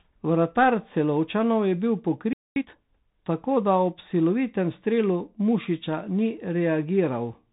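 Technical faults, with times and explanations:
Throughout: Bluetooth CVSD headset codec, plainly audible; nothing above 3.8 kHz survives, giving scratchy s sounds, overload distortion and granular hiss from one-bit delta coding.
2.33–2.56 s: playback stall after "je bil", about 230 ms of silence, likely the player running out of data before output resumed.
2.56–2.78 s: time-compressed catch-up, audio hurried at 2x speed with normal pitch as the backlog is trimmed, ending before "tako da ob".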